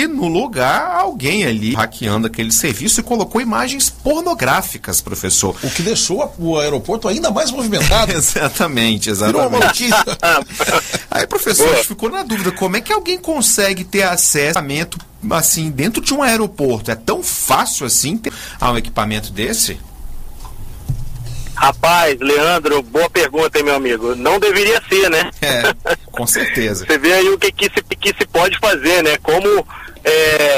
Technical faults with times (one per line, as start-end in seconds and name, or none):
1.74 CD skip
14.55 CD skip
18.29 CD skip
27.91 CD skip